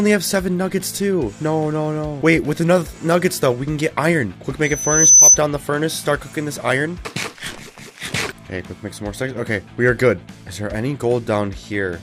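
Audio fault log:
4.63–5.39 s, loudspeaker feedback squeal: a single pure tone at 6 kHz rises out of the sound, swelling over roughly half a second until it sits about 15 dB above the program, then stops at 5.39 s. A microphone is hearing its own loudspeaker, and at 6 kHz the loop gain passes one, so that frequency feeds on itself. Unlike a steady interference whine, it is not present from the start. It grows from nothing.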